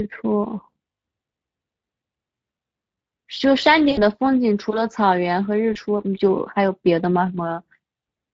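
A speech clip with a hoarse, grainy edge throughout, the noisy excitation of the Speex codec; the plainly audible damage fits a bitrate around 20 kbps, where the CELP coder lacks bits to render the voice cleanly. At 3.91 to 4.00 s and again at 5.73 to 5.77 s the sound smears into a brief, fading buzzy tone or coloured noise. This is VoIP packet loss concealed by the speech codec: the decoder stretches its last pitch and filter while lowering the gain, covering about 60 ms of missing audio at the first point and 20 ms at the second.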